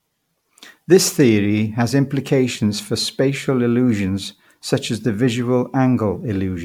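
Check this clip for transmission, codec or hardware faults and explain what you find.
Throughout the speech there is one fault, generation loss. The whole clip sounds swirly, smeared and hollow, with consonant attacks blurred and nothing above about 19.9 kHz. The likely cause is repeated lossy encoding, roughly four passes through an MP3 chain at around 96 kbit/s. Each pass requantised on a shifted frame grid, so noise and spectral holes piled up.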